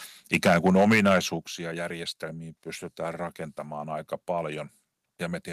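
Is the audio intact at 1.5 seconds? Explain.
No. At 1.47 s the microphone volume stepped down, likely because the call software judged the input too loud and cut the device's gain in one move. The speech and background drop by about 8 dB at once, just before "järjestelmiin pystytään rakentamaan aika".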